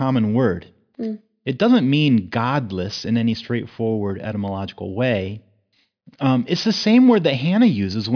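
From the very start and all the way through, the speech has aliasing. It sounds like the rate was cut from 44.1 kHz to 11 kHz with no low-pass filter first, so everything above the 5.5 kHz fold point got mirrored back down as false tones. You hear it as gritty, metallic sibilants and a spectrum packed right up to the band edge, with the folded junk sitting somewhere around 20 dB under the signal.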